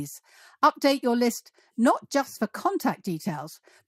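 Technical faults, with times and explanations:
Nothing in the speech recording registers as a technical fault. There is no event to place at a time or to explain.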